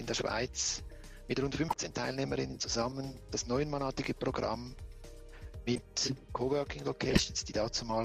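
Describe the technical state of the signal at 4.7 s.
At 4.7 s the signal is intact, with no dropout, distortion or other fault audible at that point.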